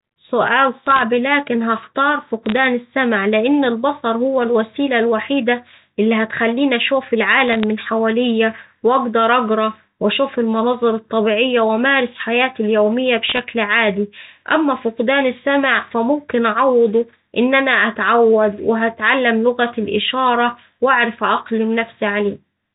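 Speech over a telephone line, band-limited at 4 kHz as G.711 coding is, with short bursts of bit errors on a digital phone line. Sharp ticks and crackle sit over the speech at 0.86 to 1.01 s, just before "لكن هختار"; at 2.46 to 2.57 s; at 7.48 to 7.63 s, between "الوحيدة اللي هتخليني أشوف" and "من حواليا وأقدر أقرا"; and at 13.29 to 13.39 s, before "عادي أما فقدان السمع". Each flipped bit corrupts one sample. Sign or high-bit hits give the loudest ticks. The density suggests an error rate of a few tenths of a percent.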